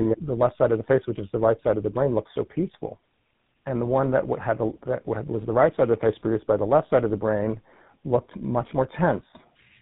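From start to finish the speech carries tandem speech coding: it has passed through two low-rate speech coders in sequence, with a plain telephone-grade link between them. The character fits GSM full-rate coding at both ends and a G.711 mu-law hop in the middle. The second coder re-encodes the first one's errors, so the speech sounds rough, muffled and warbly, and nothing survives above 3.8 kHz.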